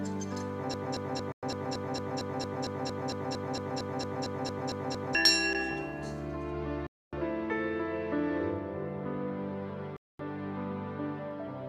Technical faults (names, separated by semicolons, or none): broken-record loop; Bluetooth stall